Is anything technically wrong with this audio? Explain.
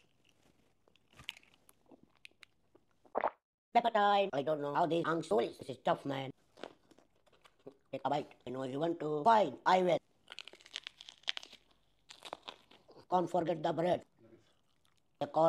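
Yes. From 0.0 to 8.1 s there is a time-stretched section. The audio runs 1.52 times faster, then the pace drops abruptly at 8.1 s while pitch stays put. It sounds rushed, likely because software squeezed that span by dropping short fragments to preserve pitch.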